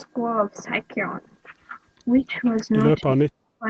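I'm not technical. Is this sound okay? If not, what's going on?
No. From 3.01 to 3.66 s the speech dips and nearly vanishes. Likely cause: speech suppressed in double talk, where echo control muted the talker while the other side spoke.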